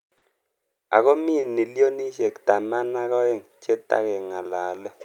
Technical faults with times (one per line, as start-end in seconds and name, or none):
0.00-5.04 clock drift between sender and receiver
0.18-0.24 short stall from a late packet
1.40-1.45 short stall from a late packet
2.22-4.71 repeated timing corrections